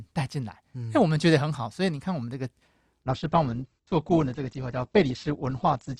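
A speech clip whose top end abruptly thins from 3.04 s to the end: nothing remains above 8.2 kHz and codec artefacts rise, with no gap. This is an adaptive stream at a lower bitrate, consistent with Opus dropping from roughly 64 to 12 kbit/s.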